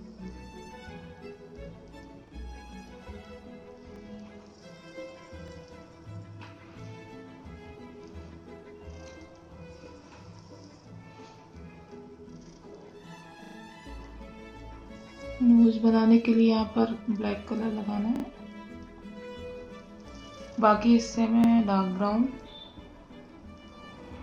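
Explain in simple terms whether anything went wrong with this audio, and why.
Something did go wrong: a repeated buffer, six times. When fresh audio failed to reach the playback device in time, it replayed the last short chunk, which sounds like a brief stutter with a hard join. Single repeats occur at 2.28, 3.96, 5.48 and 21.44 s. It repeats three times from 13.44 to 13.56 s and twice from 18.16 to 18.24 s. Each repeat lasts about 40 ms, which points to a 40 ms buffer. Little or no audio goes missing.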